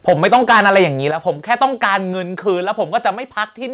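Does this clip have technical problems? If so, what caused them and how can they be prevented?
Yes. From 0.08 to 0.82 s the peaks sound flattened and crackly, running about 11 dB past full scale with a fair share of samples squared off. There's a milder patch from 1.51 to 1.96 s, about 4 dB over, where only a sliver of samples is clipped. This microphone overload is likely from the input gain sitting too high, so the loudest syllables slam into the converter's ceiling. Back the mic gain off until the loudest peaks land well below full scale.

The level also drops in sudden steps at 0.1 s (about 2 dB), 1.11 s (about 7 dB, the biggest one), 2.13 s (about 3 dB) and 3.15 s (about 2 dB), with voice and background falling together. That pattern is most likely the call software's automatic gain control turning the microphone volume down after seeing those hot peaks. Start with a sensible, lower input level, or turn off automatic mic adjustment, so the software has no reason to keep stepping it down.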